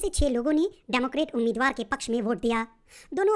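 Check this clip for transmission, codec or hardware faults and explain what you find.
One fault runs through the whole clip. Throughout, everything sounds sped up and raised in pitch, running 1.5 times fast and about 7 semitones high. That is a wrong sample rate: the samples are played back faster than they were captured, with no conversion, which fits 16 kHz material played at 24 kHz.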